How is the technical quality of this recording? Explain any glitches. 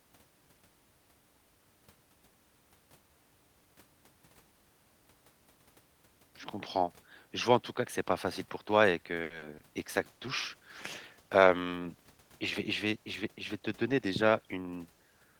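The second half of this speech clip carries a cluster of call-network faults, beginning just after "facile pour toi et" and continuing almost to the end.

Short stall from a late packet, 9.23 to 9.32 s: a packet arrived after it was due, so the jitter buffer ran dry. The receiver held the last sound for 70 ms until the packet turned up, then carried on from the same point. Nothing is lost, but a syllable is drawn out with a faint buzzy sustain, and the call sits 70 ms further behind.

Short concealed packet loss, 9.38 to 9.56 s and again 9.58 to 9.62 s: this time audio never reached the decoder, 60 ms in the first gap and 20 ms in the second. The receiver extrapolated from the preceding sound, continuing its pitch or shaped noise, then crossfaded back to real audio. Each gap is heard as a brief smear or wobble.

Call bitrate drop, 9.78 to 15.31 s: the bandwidth estimate fell and the encoder was throttled from 32 to 18 kbps, staying at the lower rate for about 5.5 s. 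With fewer bits, Opus quantises more coarsely and trims the upper frequencies, so the speech turns duller and rough or watery almost to the end of the clip.

Jitter buffer speed-up, 13.32 to 14.07 s: the buffer had built up more audio than its target, so the receiver cut out small pitch-period slices repeatedly, around 70 ms in all. Pitch is unchanged but delivery runs at about 107% speed, making this stretch sound slightly hurried.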